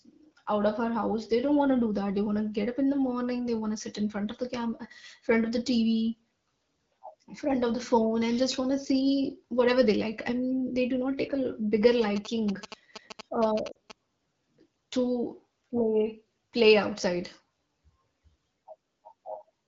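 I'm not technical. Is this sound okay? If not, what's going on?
No. From 12.02 to 13.92 s, right after "not take a bigger", GSM signalling bursts from a nearby 2G phone leak in as a galloping ticking buzz at 217 Hz. At 13.72 s, lost AMR speech frames cause a brief 40 ms drop to near silence, which fits two frames damaged by radio errors and patched over by the decoder.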